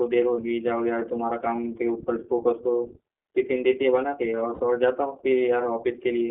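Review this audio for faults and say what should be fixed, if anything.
The whole recording has a slightly rough, synthetic edge, with nothing below about 300 Hz or above 3.5 kHz. That is iLBC codec damage, plainly audible. The codec models each short frame's excitation independently at what sounds like its 20 ms, 15.2 kbps mode, trading naturalness for robustness.

At 1.56 to 1.58 s and 4.54 to 4.60 s, the speech briefly turns into a held, faintly buzzy vowel before snapping back. These are lost iLBC frames. The decoder repeated the last pitch cycle with added noise to cover the gaps, which fits one missing 20 ms frame in the first spot and three in the second. Recovery is immediate because each frame decodes on its own.

To fix this, use a wideband codec such as Opus at a higher bitrate, and reduce packet loss with a better network path, a larger jitter buffer or forward error correction.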